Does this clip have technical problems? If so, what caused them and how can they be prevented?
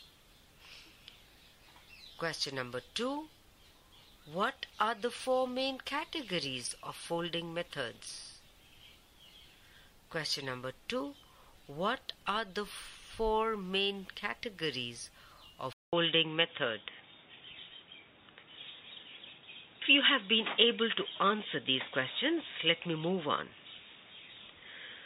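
Yes. The input was likely switched to a poorer device at 15.73 s, with the recording system moving from the original microphone to a lower-grade input. From there to the end, the sound has nothing above 3.8 kHz, so it turns dull and boxy. A brief silence of about 200 ms marks the switch, the level shifts by around 5 dB, and a new noise floor appears, sitting roughly 50 dB below the signal. Prevent it by locking the input device in the recording software and disabling automatic switching to headset or call profiles.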